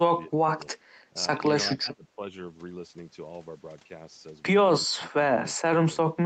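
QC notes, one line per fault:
0.28–0.59 s, 0.8–0.9 s, 1.1–1.15 s, 1.77–2.23 s and 6.13–6.18 s: speech suppressed in double talk. The voice abruptly ducks by about 20, 10, 5, 15 and 20 dB, thinning or chopping in short pieces. The likely cause is the echo canceller mistaking near-end talk for loudspeaker echo and attenuating both. On the waveform the envelope shows sudden notches. On the spectrogram the harmonics fade or break into gaps.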